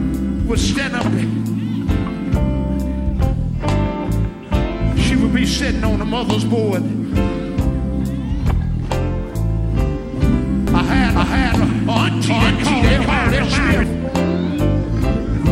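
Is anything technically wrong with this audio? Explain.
Yes. From 10.68 to 13.84 s there is a doubled audio track: a full-band copy trails the original by about 400 ms at roughly equal level, likely from a second capture path or misaligned edit. It sounds like a dry, abrupt echo; spectrograms show every event repeated, offset horizontally.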